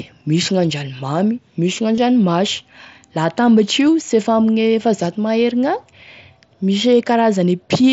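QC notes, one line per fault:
1.96–1.98 s, concealed Bluetooth headset packet loss: a 22.5 ms dropout patched with repeated recent waveform, a buzzy hold at full level, consistent with three lost packets.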